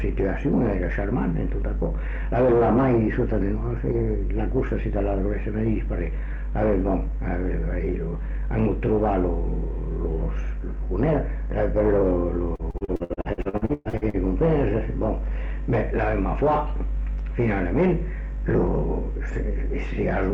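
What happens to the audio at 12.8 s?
At 12.8 s the audio turns choppy and robotic as pieces keep dropping out. This is repeated packet loss, running from 12.55 to 14.16 s. Packets arrived late or not at all, over and over, and each hole was patched by stretching the last received sound, so nearly half of that stretch is concealment rather than real signal. The longest single gap is 117 ms.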